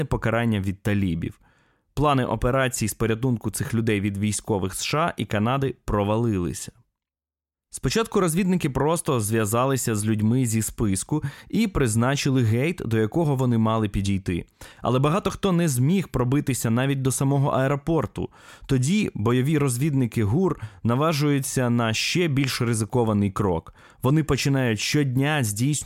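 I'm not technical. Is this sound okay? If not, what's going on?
Yes, no faults heard.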